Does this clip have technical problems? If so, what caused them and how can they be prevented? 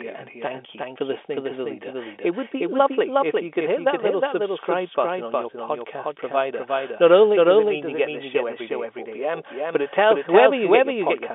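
Yes: a doubled audio track runs throughout, with a second full-band copy trailing the original by roughly four tenths of a second at about the same level. It has no decay or room colour, likely from the same signal being captured again through a slower path. Preventing it means routing the audio through a single capture path and muting any monitoring or loopback feed that returns it.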